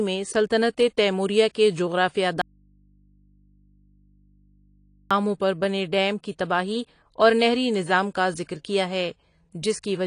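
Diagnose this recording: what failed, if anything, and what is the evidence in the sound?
Codec stage: the speech is dull and smeared throughout, with nothing above 10.2 kHz and a warbly texture. This is likely AAC compression, consistent with about 32 kbps AAC-LC rather than a simple low-pass.

Audio dropout to a faint residue from 2.42 to 5.11 s, after "سلطنت تیموریہ کے جغرافیہ" until "آمو پر بنے ڈیم": the speech cuts abruptly to hum about 35 dB down. The live hum rules out a pause, pointing to a likely broken analogue input connection.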